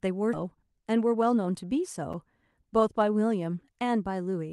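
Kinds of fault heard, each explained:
Skip ahead: at 0.34 s the speech jumps forward with no gap at all. Roughly a fifth of a second of audio was dropped, likely because the buffer overflowed while later audio was already waiting, so the two sides butt straight together.
Jitter buffer speed-up: from 0.43 to 1.64 s the speech runs at 108% speed with its pitch unchanged. The buffer was holding more than its target, so lots of tiny pitch-period slices, around a tenth of a second in total, got trimmed, which sounds hurried.
Block of digital silence: at 2.13 s a 6.6 ms run of samples drops out and comes straight back with no fade. Being so short, this block comes across as a small tick.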